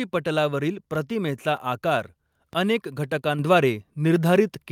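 At 0.95 s and again at 2.53 s the speech carries a DC step: the waveform's zero line jumps abruptly and then drains away, decaying like an offset passing through a 5 Hz high-pass. Each jump sounds as a brief low thump, while the speech continues unchanged.

At 3.39 s the microphone volume is stepped up: the input gain rises in one move by about 4 dB within 10 ms. Speech and background noise both become louder at once, a sudden level jump in mid-stream.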